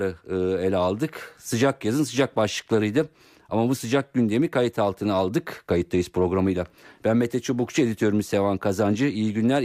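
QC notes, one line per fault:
Nothing to flag here, the speech comes across without any technical trouble worth a QC line.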